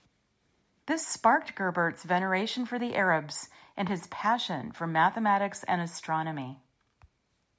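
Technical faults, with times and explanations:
Nothing here counts as a fault: the speech has simply gone through a call's microphone processing, which trims away the deepest bass and leaves nothing above 8 kHz, and that's just how such a path is meant to sound.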